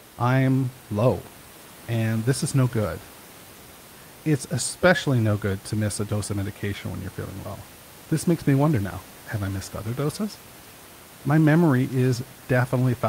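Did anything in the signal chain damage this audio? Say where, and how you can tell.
No, nothing in the signal chain damaged this speech.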